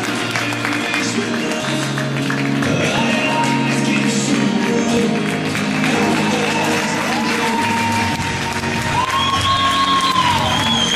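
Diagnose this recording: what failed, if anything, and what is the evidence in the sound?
Tiny clicks or skips land at 1.0, 2.98, 4.97 and 6.95 s, spaced about 2 s apart. This is overlap between stream segments at the streaming stage. Adjacent 2 s segments carry overlapping time stamps, so the player trims about 6 to 17 ms of real audio at each join and the waveform jumps.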